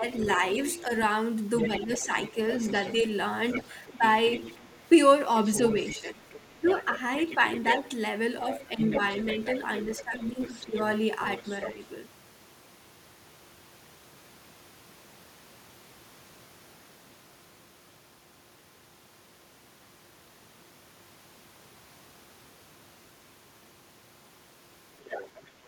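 Speech suppressed in double talk appears first, between 0.0 and 2.11 s: the talker's level dips by around 5 dB for roughly a third of a second in short pieces. This is likely an echo canceller that could not tell the talker from loudspeaker echo while both sides spoke, so it turned everything down. The same dips return at 3.97 to 4.02 s and 8.75 to 8.8 s, both shallow and brief, and more deeply at 5.6 to 6.66 s (about 15 dB, roughly 0.2 s in total) and 9.97 to 10.74 s (about 10 dB, nearly half a second).

The other side's voice leaking through runs from 0.21 to 11.71 s, about 15 dB below the talker: a second, fainter voice that the canceller likely left in the microphone signal after it came from the loudspeaker. It returns from 25.0 s to the end, louder at about 10 dB below the talker.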